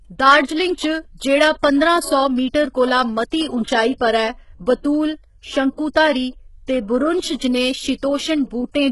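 From start to finish the speech carries heavy codec damage, most likely from HE-AAC compression at a very low bitrate, consistent with something near 12 kbps. Only the lower spectrum is coded directly; the treble is rebuilt by copying lower bands upward under a coarse envelope. Those synthetic highs don't align harmonically with the real content, so sibilants come across gritty, metallic and lispy. Nothing at all reaches above 11.5 kHz.

At 3.98 to 4.01 s a pre-echo appears, spreading over about 27 ms before a sharp attack. The transform codec distributes quantisation noise across the whole block, so noise sized for the loud onset also fills the quiet stretch just ahead of it. A brief hiss arrives before the transient, and the attack itself sounds softened and smeared rather than crisp.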